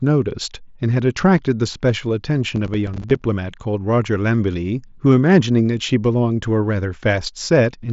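From 2.56 to 3.25 s the speech breaks into processor overload crackle. The processor repeatedly misses deadlines for short buffers, around 5 ms each, roughly twenty times, and each miss drops in silence with hard edges. The result is a gritty tearing over the mSBC-limited band topping out near 7.7 kHz.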